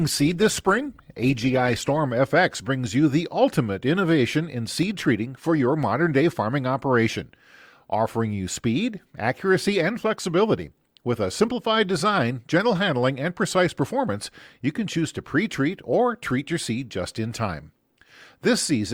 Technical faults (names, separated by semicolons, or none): adaptive stream starting at a low bitrate; dropped samples